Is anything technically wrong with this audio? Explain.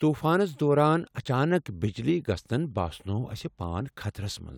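No, nothing technically wrong is audible anywhere in this speech recording.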